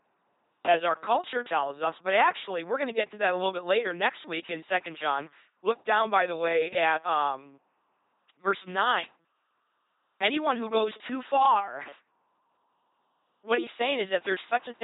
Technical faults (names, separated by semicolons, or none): LPC-10 vocoder